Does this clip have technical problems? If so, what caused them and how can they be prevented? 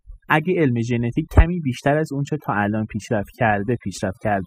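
Yes, there's overdone noise removal running through the whole clip. The denoiser was pushed too hard, so any frequency band sitting close to its idea of the noise gets pulled way down or cut out, and the softer parts of the speech get swallowed along with it. That's why the background in the gaps drops away and breaks up into little twinkly specks. To prevent it, ease off the reduction amount and keep the noise down at the source instead.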